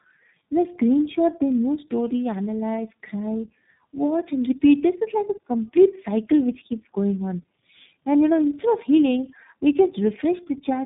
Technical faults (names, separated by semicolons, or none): tandem speech coding